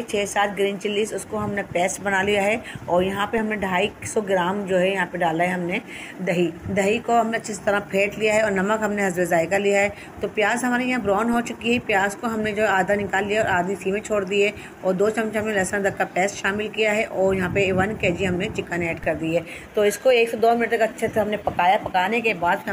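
At 3.38, 11.33 and 19.04 s a DC step shifts the waveform's zero line by about -26 dBFS (about -24 dBFS at the last), then bleeds away through a 20 Hz high-pass. Each is a low thump, seen as a baseline jump with decaying tail and a brief vertical smear at the bottom of the spectrogram.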